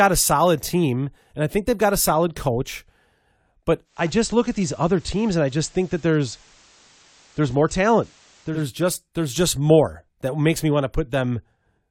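At 3.84 s, just before "just there's just more", the digital radio blends to analogue: the receiver loses the digital stream and cross-fades over about 262 ms to the FM broadcast. Hiss sits roughly 30 dB down, and level holds steady until the return at 8.67 s.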